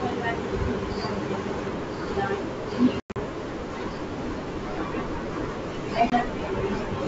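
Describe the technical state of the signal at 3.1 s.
At 3.1 s the signal is inside a burst of packet loss on an ADPCM call, spanning 3.00 to 3.17 s: about 140 ms dropped across 160 ms, with the longest run at 100 ms, which fits around seven lost packets. The decoder's adaptive predictor and step size drift from the sender's, so the speech breaks into hard-edged silent holes and comes back briefly mistracked.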